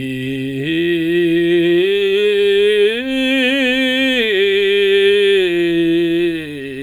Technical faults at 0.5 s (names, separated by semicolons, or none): none